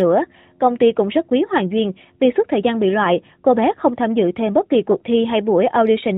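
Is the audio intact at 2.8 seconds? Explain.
Yes, the audio is intact at 2.8 s, with no fault at that moment beyond the narrowband character of the AMR mobile codec the speech passes through.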